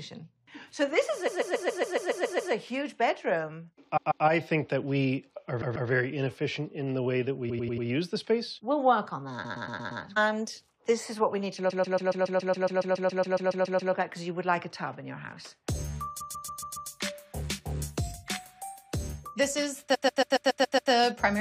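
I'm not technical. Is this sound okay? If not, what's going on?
No. The sound stutters, replaying short snippets of about 0.1 to 0.14 seconds over and over at 1.27–2.52, 3.96–4.24, 5.61–5.89, 7.49–7.86, 9.44–10.02, 11.69–13.92, 16.20–16.89 and 19.94–20.91 s. This is repeated frames: stored chunks of audio were played again, stretching the clip.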